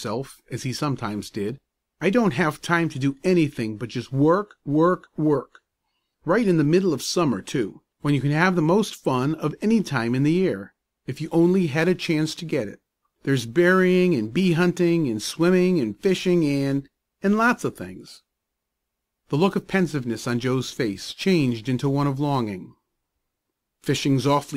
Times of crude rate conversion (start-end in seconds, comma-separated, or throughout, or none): 11.41-24.56